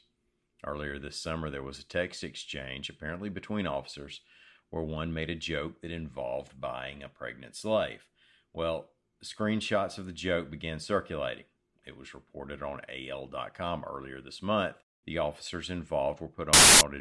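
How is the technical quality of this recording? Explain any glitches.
The recording has one clear glitch near the end. File tags played as audio, 16.53 to 16.81 s: an embedded cover picture's compressed bytes were decoded as samples, producing a hard-edged burst of very loud white noise.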